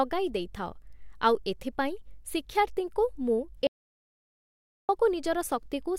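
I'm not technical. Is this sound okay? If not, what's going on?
No, not entirely. At 3.67 seconds the speech suddenly cuts out and stays completely silent until 4.89 seconds, about 1.2 seconds of nothing at all, not even the faint background hiss of the room. Then the speech picks up again mid-flow. This is an audio dropout to silence. The likely cause is that the microphone or its connection briefly stopped delivering sound while the recording carried on capturing blank silence. Whatever was said in that gap is lost.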